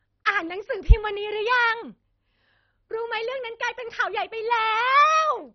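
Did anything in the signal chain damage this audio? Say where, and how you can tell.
Yes, at the codec stage. The speech is dull throughout, with nothing above 6.1 kHz and a gurgling, granular texture. This is likely heavy MP2 compression switching off starved upper sub-bands.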